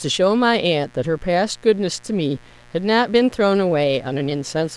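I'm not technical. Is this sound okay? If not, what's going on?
No. A mains buzz runs under the speech throughout: electrical interference at 60 Hz, heard as a raspy, bright buzz rather than a smooth, low hum.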